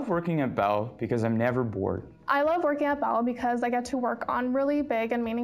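Imaging from linear upsampling runs throughout. The band stops at 8 kHz, which fits a rate raised from 16 kHz to 48 kHz by straight-line interpolation. That dulls the top and leaves a mirrored image between 8 kHz and 16 kHz, about 40 dB down, heard as metallic shimmer.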